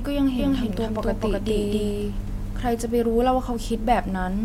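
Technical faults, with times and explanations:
0.39 to 2.71 s, doubled audio track: A second copy of the speech runs alongside the first, trailing by roughly a third of a second. It is about as loud as the original and covers the full band. It has no decay or room colour, so it is not an echo. It cuts in abruptly at 0.39 s and drops out just as suddenly at 2.71 s. The likely cause is a slower second capture path or an edit leaving two copies out of step.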